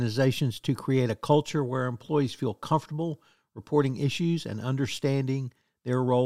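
No technical faults are audible anywhere in this speech recording.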